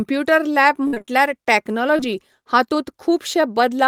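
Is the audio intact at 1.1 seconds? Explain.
No, that's right at the tail of a repeated packet loss (robotic sound) burst, 0.87 to 1.10 s: five quick dropouts patched by stretching the last sound, so it turns choppy with pieces missing.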